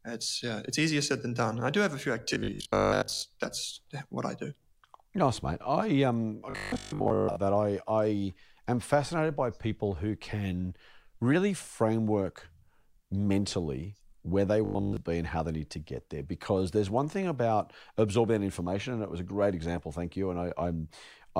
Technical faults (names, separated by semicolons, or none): robotic sound from repeated short buffers